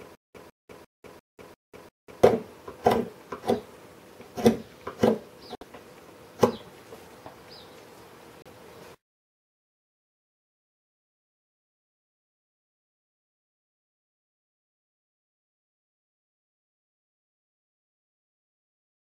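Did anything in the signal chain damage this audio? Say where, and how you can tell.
Yes, two problems, both at the playback end. The clip opens mid-stutter with silent gaps: from the very start to about 2.23 s, the same 151 ms burst plays six times, each followed by roughly 196 ms of dead digital silence, so it repeats every 347 ms. That even, mechanical pacing is the tell. It's likely a stalled player or stream replaying its last fragment on each retry and then running dry, so whatever should have played there is gone.

Then there are two short dropouts, one of about 60 ms at 5.55 s and one of about 35 ms at 8.42 s. The sound just cuts to silence and resumes, with no repeated material around the gaps. That pattern points to a Bluetooth stall, likely interference on the wireless link holding packets back until the headphones' buffer emptied, with playback pausing until the resent packets arrived.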